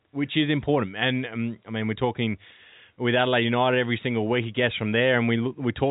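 Nothing's wrong in this speech clip; it just has the narrow telephone-band sound of G.711 coding, with nothing above about 3.8 kHz.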